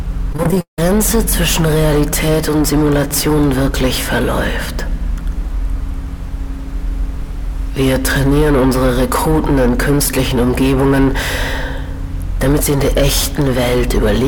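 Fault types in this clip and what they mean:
Repeated packet loss (robotic sound): right at the start, from about 0.33 to 0.79 s, the stream keeps dropping out, eight gaps in under half a second. Each hole gets papered over by stretching the last bit of sound, so about 250 ms of that stretch is filler, with the longest patch around 167 ms. With roughly half the span concealed, it comes across as choppy, like the audio is stuttering through a bad connection.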